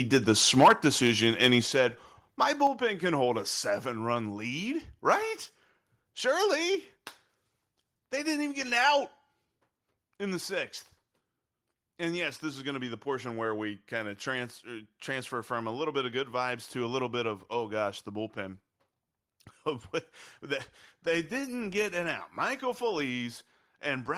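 Microphone overload at 0.13 to 0.31 s puts a harsh, crackling edge on the loudest syllables. The peaks push about 3 dB past the converter's limit, and a small share of samples is flattened. The likely cause is an input volume set too high, so the converter clips the waveform tops. A longer overload follows from 0.57 to 1.54 s, just before "he said", reaching about 7 dB over, with a few percent of samples cut and a rougher, grittier crackle.

Microphone volume stepped down at 0.63 s, during that second overload, drops the sound and background together by about 2 dB in one abrupt step. This is likely the call software reacting to the clipping by lowering the device's input gain. Further steps follow at 1.62 s (about 5 dB) and 2.67 s (about 4 dB, just before "can hold a seven"), each an audible sudden dip.

Microphone overload returns briefly at 5.10 to 5.13 s, right after "a seven run lead", only about 1 dB over and heard as a short crackle. 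The microphone volume is stepped down again at 6.75 s and 9.45 s, by about 2 dB each time. Both steps are heard as small sudden drops in overall level.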